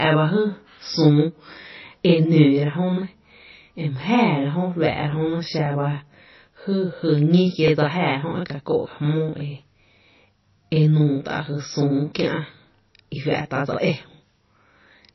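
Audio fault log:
throughout: channel delay (doubling). One channel arrives 40 ms late and is summed to mono, so every sound is heard twice as a slap echo.
throughout: low-bitrate audio saved at a high bitrate. Nothing is heard above 5.8 kHz, and MP3 smearing persists. This is likely a very low-bitrate MP3 re-encoded at a high bitrate.
3.64 s, 7.68 s, 11.72 s, 13.74 s: overlapping chunks. At these joins 20 ms of audio plays twice. Each one gives a brief click or stutter, spaced at multiples of 2 s.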